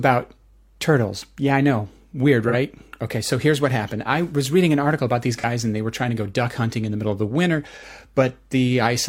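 Speech with AAC frame loss with concealment at 2.48 s, at 5.39 s between "an article about these" and "and they were trying", and at 7.77 s after "middle of the winter". Each is a brief smeared, noisy patch of about 43 ms, consistent with one lost frame rebuilt from the previous spectrum.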